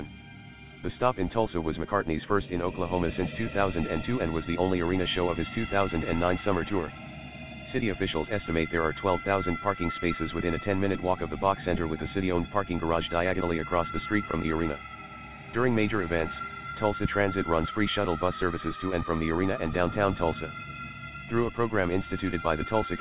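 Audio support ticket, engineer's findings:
No faults found; the signal is band-limited with nothing above 4 kHz, consistent with a narrowband telephony call path such as G.711 at 64 kbps, and carries that codec's usual low-level coding noise.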